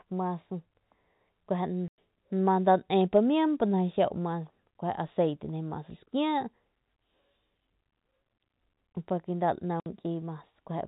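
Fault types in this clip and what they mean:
Packet loss filled with silence: Packets carrying the speech never reached the receiver, which played nothing in their place instead of concealing the gap. The speech cuts out abruptly twice, for 100 ms near 1.88 s and 60 ms near 9.8 s. Both lengths fit 20 ms packets. Each hole starts and ends on a hard edge, and the narrow telephone band of the G.711 coding carries through the speech on either side.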